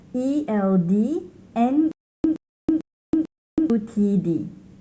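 From 1.92 to 3.70 s, a stutter with silent gaps: a 120 ms burst repeats four times, separated by 326 ms of dead silence, likely a stalled stream retrying.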